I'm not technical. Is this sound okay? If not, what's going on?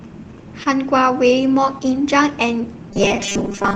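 No. Around 0.63 to 0.67 s there's a brief smear: short concealed packet loss, where about 20 ms of the call arrived too late and the receiver patched the gap by stretching the preceding sound.

From 2.91 s to the end, the speech turns into a rigid metallic buzz at 200 Hz. That's robotic sound from repeated short buffers, likely audio arriving too slowly, so tiny 5 ms slices were replayed over and over.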